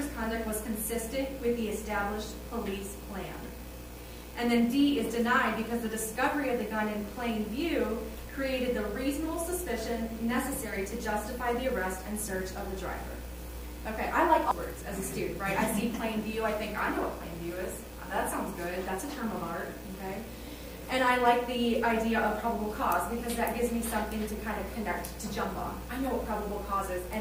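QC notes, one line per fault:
14.51 s, damaged data in a compressed stream: a quick glitch where a bit of the encoded stream got mangled. The decoder can't read those frames, loses sync and hunts for the next valid header, so the sound breaks up briefly.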